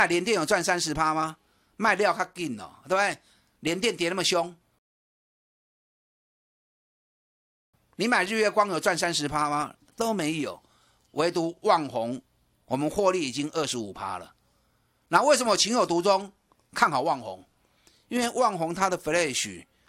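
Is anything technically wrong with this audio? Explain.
Yes. A rebuffering stall runs from 4.79 to 7.74 s: playback ran dry and waited for data, inserting about 2.95 s of dead silence before the speech picks up exactly where it left off. The waveform shows a flat gap, and the spectrogram shows a blank vertical band.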